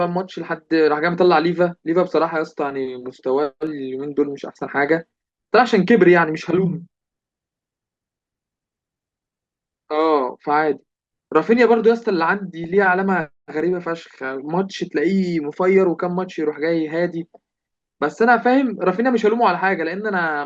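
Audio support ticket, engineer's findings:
DAB burbling, 12.64–12.74 s: burbling over speech. Bit errors slipping past error correction scramble MP2 sub-band levels. Isolated bands jump, unlike a full-band dropout.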